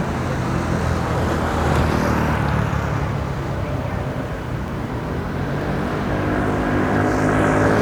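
Sounds with three sharp single clicks at 4.68, 5.61 and 6.48 s, likely dropped samples: well under a millisecond skipped, so unlike a dropout no audible gap appears.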